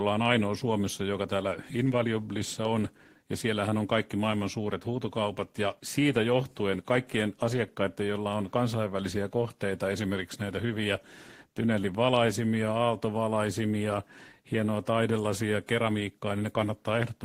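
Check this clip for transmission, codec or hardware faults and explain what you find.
No faults turn up when I check the clip.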